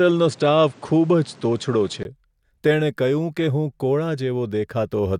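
From the start to 2.05 s the speech is dull, with nothing above 9.8 kHz, a different noise floor about 30 dB below the speech and a level shift, before a 20 ms gap: likely an input switched to a poorer device.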